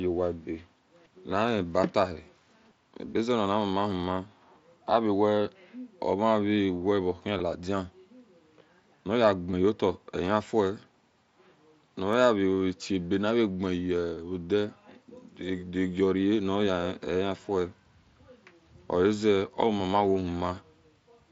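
Concealed Bluetooth headset packet loss hits at 7.38 s, 9.51 s and 14.15 to 14.17 s. The receiver patched each brief gap by repeating recent waveform, so each sounds like a short buzzy tone with a small warble where real audio returns.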